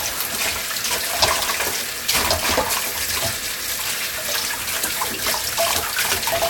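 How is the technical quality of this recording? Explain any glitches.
Nothing in the recording stood out as a technical problem on listening, so there are no glitches to explain.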